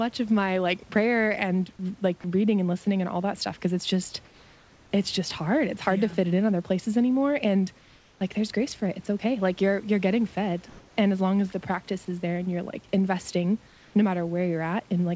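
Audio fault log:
4.25–4.91 s, 7.79–8.21 s and 13.67–13.94 s: comfort noise in place of the background. The room noise turns flat, featureless and about 3 dB quieter, likely because the sender stopped transmitting during the pauses.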